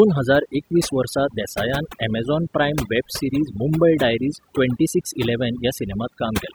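Overdone noise removal runs through the whole clip. A noise reduction stage was set too aggressively, so any frequency band that came close to its estimate of the background noise was pulled far down or shut off entirely. Quieter parts of the speech fell under that threshold and were removed along with the noise. The background drops and breaks up into twinkling specks.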